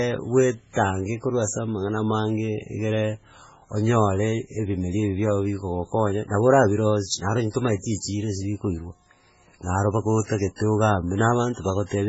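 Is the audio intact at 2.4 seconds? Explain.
No. At 2.4 seconds the speech carries heavy codec damage, as it does across the whole clip. Nothing is present above 7.7 kHz, so the top end is cut off. The likely cause is MP3 compression at a very low bitrate, around 16 kbps. With so few bits, the encoder drops weaker frequency lines, and those lines switch on and off from frame to frame. The treble is also removed above a fixed frequency.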